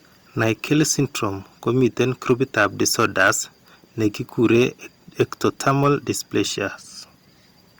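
Hard clipping shows up four times: 0.41 to 0.82 s, 1.83 to 3.31 s, 4.45 to 4.64 s and 5.20 to 5.88 s. The speech overshoots the stage by about 5, 7, 2 and 5 dB, so peaks get chopped flat into crackly fuzz, roughest in that long second stretch.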